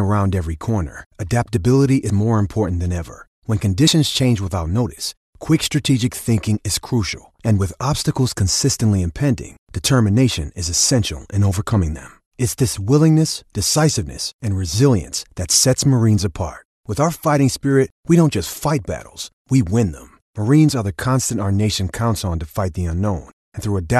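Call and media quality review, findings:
Compressed frames skipped at 2.09 s and 3.87 s. Speech jumps ahead by about three frames (roughly 70 ms), then about one (roughly 30 ms), against a 26.1 ms frame. Frames missing or rejected by the decoder.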